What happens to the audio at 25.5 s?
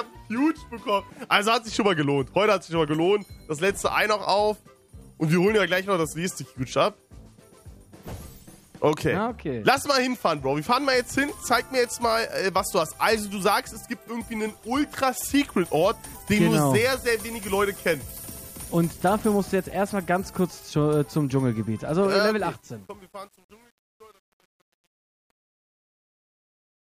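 At 25.5 s the clip is deep in truncation distortion on the fade-out, which runs from 22.14 s to the end at 26.99 s and is at its worst from 22.65 s onward. The fade stage keeps too few bits and adds no dither, consistent with about 9-bit resolution. As the level drops toward the smallest step, the waveform collapses into coarse square steps. The tail sounds gritty.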